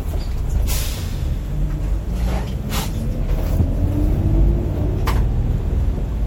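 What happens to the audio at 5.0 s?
MP3 compression damage runs through the whole clip, so it is present at 5.0 s too. The sound has a watery, swirly quality with smeared attacks, likely from an MP3 encoder starved of bits, which fits a rate near 64 kbps: weak frequency lines drop in and out between frames.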